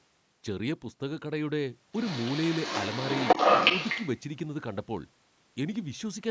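A speech clip in which the call's echo canceller likely failed to fully remove the far end's loudspeaker playback from the microphone, so the other side's voice leaking through is audible from 1.95 to 4.19 s, somewhat louder than the near talker, over a band that stops at 8 kHz.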